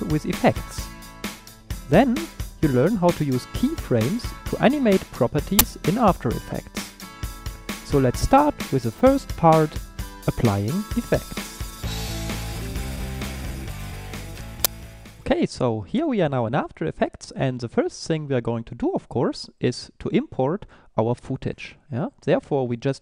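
The audio has two uninitialised buffer faults: brief glitches from 5.59 to 5.61 s and at 14.65 s. Leftover memory played as samples, fitting 1024- and 512-sample blocks.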